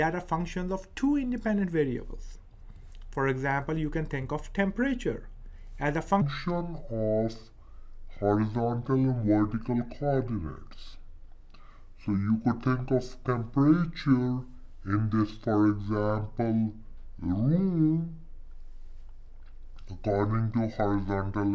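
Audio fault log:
6.2 to 21.5 s, wrong sample rate: the sound abruptly turns slower and deeper, running at two-thirds speed and about 7 semitones lower, which fits 24 kHz audio played back at 16 kHz. Unlike a pitch shift or time-stretch, tempo and pitch drop together by the same ratio.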